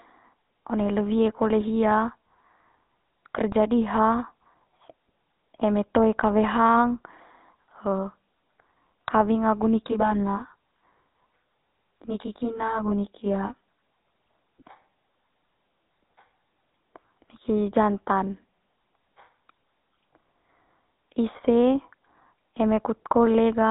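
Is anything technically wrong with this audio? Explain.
Yes, there are two faults.

The GSM full-rate codec is present for the whole recording. The speech has a buzzy, gravelly roughness and nothing above 3.9 kHz, which fits GSM full rate at about 13 kbps. The codec models the vocal tract as a filter and excites it with a sparse, regularly spaced pulse train, so fine detail in the voice is replaced by a coarse synthetic texture. The damage is plainly audible.

Channel delay (comb filtering) occurs from 9.87 to 14.08 s. One channel lags the other by around 20 ms, and the two are summed to mono. The shared content cancels at evenly spaced frequencies, starting somewhere near 30 Hz and repeating roughly every 50 Hz upward. Because the delay is this long, the speech in this stretch sounds rough, with a slightly doubled quality.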